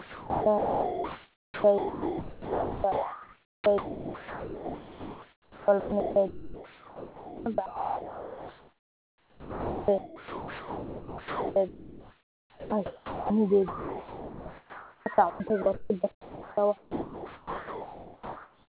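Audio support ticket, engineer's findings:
Sound chopped by the voice detector, 0 to 13.3 s: choppy, with holes in the sound. About 12 s of it swapped for comfort noise. Likely the sender's VAD gating too aggressively.

Same thing again, 13.68 s to the end: roughly 4.2 s filled with comfort noise, same chopping.

Band stops at 4 kHz, which fits a narrowband 64 kbps G.711-style call leg.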